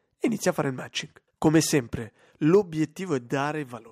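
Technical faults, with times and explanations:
0.48–0.50 s, 1.46–1.59 s and 2.54–2.56 s: microphone overload. The input volume was likely set too high, so speech peaks overshot the converter's limit by about 1, 2 and 3 dB and had their tops sheared off. This causes a brief crackle just before "a fare il", a longer rasp near 1.5 s, and the harshest clipping at 2.55 s.
2.55 s and 3.54 s: microphone volume stepped down. The call software likely responded to the clipping by lowering the device's input gain in single steps of about 3 dB and then about 2 dB. Speech and background therefore drop abruptly in level, the first time immediately after the worst distorted peak.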